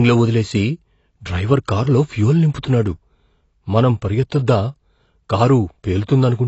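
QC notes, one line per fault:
throughout: AAC compression. The speech sounds dull and smeared, with nothing above 8 kHz and a warbling, fizzy texture on sustained vowels and sibilants. This is likely low-bitrate AAC-LC coding, consistent with roughly 24 kbps, which lowers the cut-off and quantises the spectrum coarsely.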